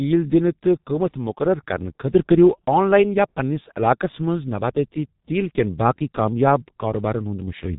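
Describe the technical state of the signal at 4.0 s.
At 4.0 s, as across the whole speech clip, G.723.1 codec damage cuts everything above 3.8 kHz. Its slow, coarse voice model adds hoarseness and smeared consonants that a plain low-pass filter would not, fitting a bitrate of roughly 6 kbit/s.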